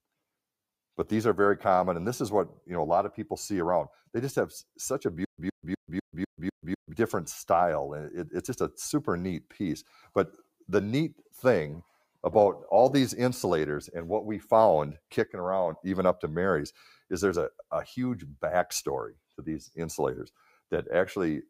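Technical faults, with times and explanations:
5.25–6.93 s, stutter with silent gaps: the same 114 ms burst repeats six times, each followed by 135 ms of digital silence, a steady 249 ms cycle. This likely comes from a stalled stream replaying its last fragment. The waveform shows identical blocks separated by flat silent lines. The spectrogram shows repeated slices with blank gaps.
16.73–17.11 s and 20.35–20.71 s, sound cut by the noise suppressor: in each span, roughly a fifth of a second of sound is pulled down by about 13 dB and about 15 dB respectively, so it sinks in level. The spectrogram shows faded energy, and the waveform's envelope dips.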